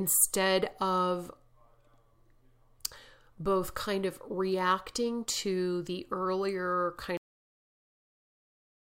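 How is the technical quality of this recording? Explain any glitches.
The recording has one clear fault: a cut-off end. At 7.17 s, right after "reacting to the earlier", the speech stops mid-sound and falls straight to digital silence with no decay, remaining silent to the end. The final buffers were never written or played, so the sound is cut short rather than fading out.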